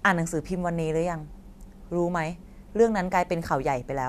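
No audible technical faults anywhere in the speech, with no dropouts, clicks, distortion or level problems at any point.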